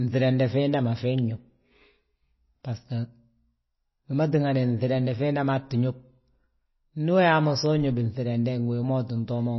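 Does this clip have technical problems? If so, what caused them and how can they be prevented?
Yes. Throughout the speech there is a hard ceiling with nothing above 5.8 kHz, and a watery, swirling texture as weak frequency lines switch on and off between frames, with s sounds turning chirpy. This is likely MP3 compression at a starved bitrate, which fits about 24 kbps. A plain low-pass filter would dull the top just as sharply but leave the remaining sound steady, without the flickering swirl. To prevent it, encode at a higher bitrate or keep an uncompressed or lossless master.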